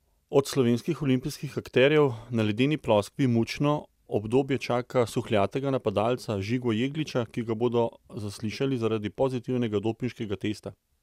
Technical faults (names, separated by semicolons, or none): none